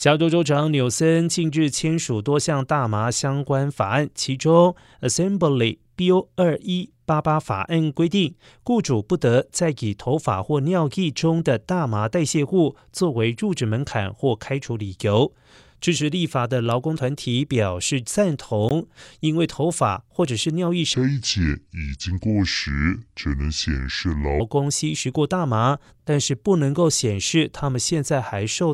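At 18.69 s there's a gap at a join of encoded pieces: a brief hole of about 18.5 ms punched into the speech, with hard edges that the codec smears. The two sections were encoded separately and butted together without trimming, so the first piece's padded last frame and the second piece's encoder start-up delay both survive as silence. The talking then picks up exactly where it broke off.

From 20.94 s to 24.40 s comes a section at the wrong speed. The speech drags at about 0.685 times its proper rate, and because speed and pitch move together, it also drops by roughly seven semitones, so it sounds deep, slow and heavy, then snaps back to normal. The likely cause is that this stretch was played or edited against the wrong clock.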